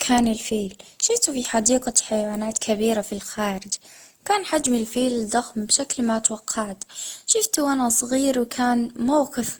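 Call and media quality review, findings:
Generation loss, throughout the speech: swirly, smeared, hollow texture with blurred consonant attacks, while the spectrum still reaches about 20.1 kHz. Likely repeated lossy re-encoding, roughly seven passes through an Opus-like chain, each requantising on a shifted frame grid so noise accumulates. This differs from a single low-bitrate encode, which would cut bandwidth before sounding this smeared.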